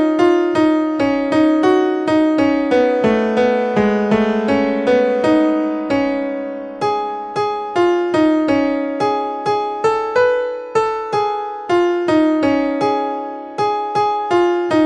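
Nothing here sounds technically wrong; the audio carries on without any problem worth pointing to.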